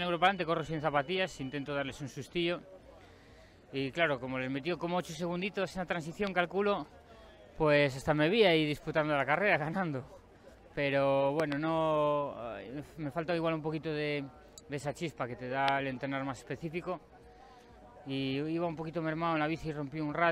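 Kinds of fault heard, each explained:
Loud pop: sharp thumps land over the sound at 6.27, 11.4 (two in quick succession) and 15.68 s. A voltage spike is the likely cause.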